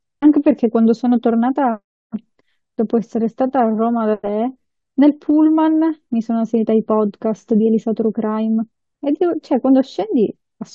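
No technical faults can be heard in this speech recording.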